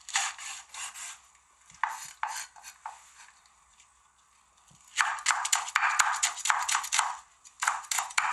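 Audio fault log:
throughout, Bluetooth SBC compression: treble flickers and drops out under a gritty, aliased haze, likely from coarse sub-band quantisation with starved upper bands, fitting roughly 96 kbps.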